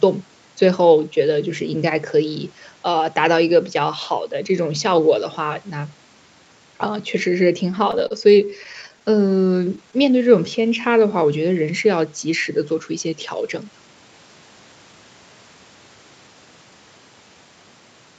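From 7.71 to 9.95 s the speech suffers repeated stalls (stutter): the jitter buffer kept running dry as packets arrived late, and the receiver covered 22 short gaps by extending the last sound, 239 ms in all, with the longest gap 30 ms and about 11% of that span concealed. Nothing is lost, but the speech catches and drags. On a spectrogram the harmonics show brief flat, smeared patches, and the waveform shows small runs of near-identical repeated cycles.

Right after, from 9.99 to 11.12 s, comes a jitter buffer slow-down. To rebuild its reserve, the receiver repeated single pitch periods many times over, adding 130 ms and playing this stretch at 89% speed. Pitch stays put, so syllables sound drawn out rather than lower. On a spectrogram the formant movements look stretched sideways at unchanged harmonic spacing, and the waveform holds stretches of repeated, almost identical periods.

From 13.04 to 14.09 s a jitter buffer speed-up works the other way. 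With too much audio queued, the receiver cut out short pieces of one or a few pitch periods in succession, removing roughly 150 ms and running this passage at 113% speed. The speech sounds hurried at its normal pitch. A spectrogram shows compressed formant transitions and shortened syllables, and the waveform shows small seams where periods were spliced out. Throughout, the Opus call path limits content to 8 kHz, visible as an empty band above that line.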